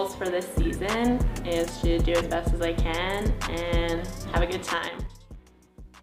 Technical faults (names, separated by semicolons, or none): zipper noise